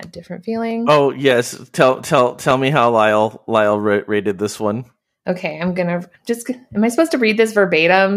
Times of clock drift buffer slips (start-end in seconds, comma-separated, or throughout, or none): 0.11-7.91